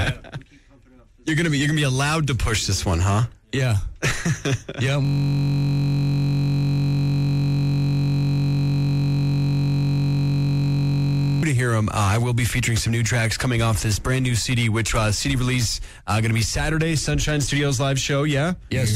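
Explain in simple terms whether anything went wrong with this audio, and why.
The computer stalled from 5.05 to 11.43 s, a system hang loop. The sound hardware kept replaying the same tiny 21.33 ms slice, which fits a 1024-sample buffer, hundreds of times over. That produces a steady buzz at about 47 repeats per second.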